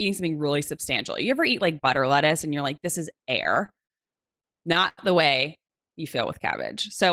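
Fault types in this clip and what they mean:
Repeated stalls (stutter): packets reached the receiver late, so its jitter buffer kept running dry, and each shortfall was bridged by extending the last sound, with fills up to 92 ms. The speech drags and stutters through two stretches, 3.13–3.92 s and 4.40–4.99 s.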